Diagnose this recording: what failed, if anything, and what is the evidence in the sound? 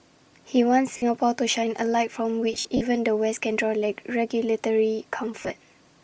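Throughout the speech the upper frequencies have a breathy, grainy edge, with hiss-like texture standing in for real detail, and the damage is plainly audible. This is a codec-stage fault, likely Bluetooth LC3 compression running at a low rate, consistent with about 32 kbps and 10 ms frames. At that rate the encoder discards much of the upper spectrum and the decoder fills those bands with noise, which produces the rough sheen.

The speech breaks into short noisy smears at 0.97–1.02 s, over 2.53–2.82 s, and at 5.40–5.50 s. The middle stretch is the worst: about 160 ms of gaps scattered across 280 ms, the longest run roughly 70 ms, where the sound thins and fades. These are lost LE Audio frames on the wireless link. The LC3 decoder conceals each gap by replaying the last spectrum with randomised signs and fades it as the loss continues.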